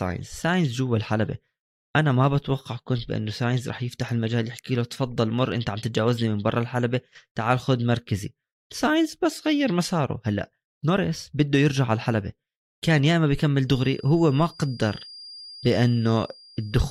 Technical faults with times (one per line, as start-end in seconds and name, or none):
13.64-16.90 feedback whistle